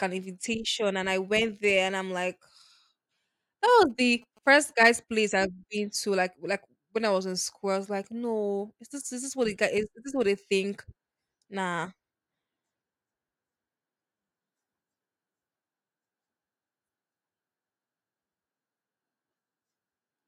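Speech recording with GSM signalling bursts from 3.90 to 4.95 s. A nearby 2G phone's radio bursts are rectified into a galloping dit-dit-dit of short buzzes at 217 Hz, well below the speech.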